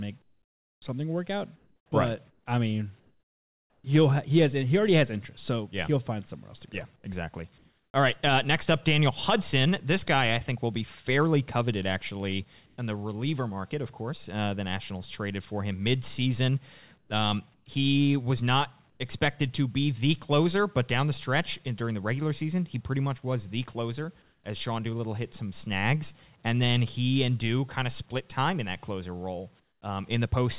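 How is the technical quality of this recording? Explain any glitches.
The recording has two recurring glitches typical of a call link that stops sending during pauses. Throughout, nothing is heard above 4 kHz, which fits a narrowband telephone codec such as G.711.

Comfort noise in place of the background appears at 0.22–3.84, 6.96–7.94, 12.66–12.78, 16.98–19.0, 24.22–24.44 and 29.6–29.82 s. The likely cause is that the sender went silent in pauses and the receiver substituted synthetic noise. The real background, about 40 dB below the loud parts, becomes a flat, featureless hiss. It keeps the same level at 12.66 s but drops about 3 dB at 24.22 s and about 12 dB at 29.6 s.

Onset clipped by the voice detector occurs at 1.87 s and 17.07 s. The detector was likely slow to register that sound had resumed, so the first 50 ms and 30 ms were never sent and were filled with comfort noise. The sound therefore starts abruptly, missing its soft beginning.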